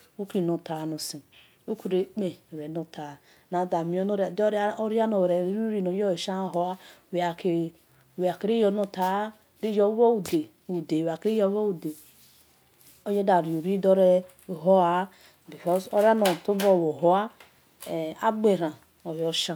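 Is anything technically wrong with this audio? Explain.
No, nothing technically wrong can be heard anywhere in this speech recording.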